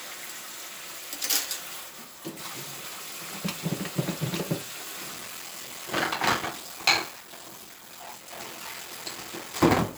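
From 5.12 s to the end comes a block size mismatch (padded). Short blocks are zero-filled, fitting a 1024-sample read block, producing a steady 43.1 Hz buzz. The sounds slow to 0.861 speed while keeping their timbre, unlike a sample-rate slowdown.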